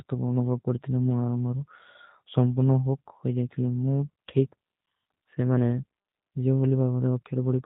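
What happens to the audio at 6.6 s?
At 6.6 s the speech carries the same G.729 codec coloration heard across the whole clip: nothing above 4 kHz, and a rough, buzzy synthetic edge from rebuilding each 10 ms frame out of a vocal tract filter and a few pulses, which fits an 8 kbit/s stream. A plain band limit would sound dull but clean, without that grain.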